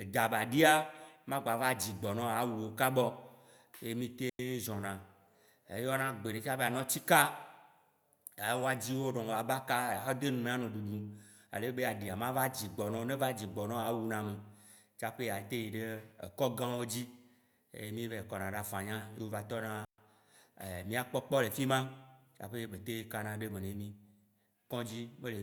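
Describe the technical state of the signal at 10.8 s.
At 10.8 s the speech signal is intact, with no audible technical fault at that moment.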